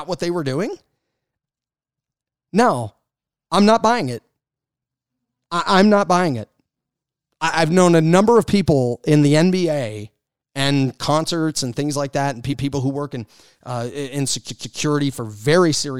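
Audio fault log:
12.52–12.66 s, repeated frames: a 144 ms block of speech is played once more, so the listener hears the same fraction of a second twice in a stutter. The block length points to a run of six compressed frames being written or sent twice, and the clip grows by 144 ms.
14.49–14.77 s, repeated frames: the same kind of 144 ms block plays twice extra, a longer triple stutter that adds 288 ms to the speech.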